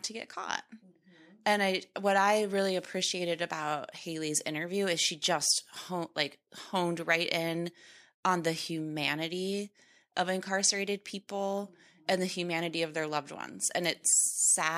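Nothing in this speech recording stands out as a technical fault, so there's nothing here to flag.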